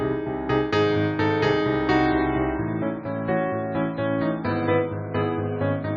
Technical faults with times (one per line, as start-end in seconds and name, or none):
2.06-5.97 adaptive stream at a lower bitrate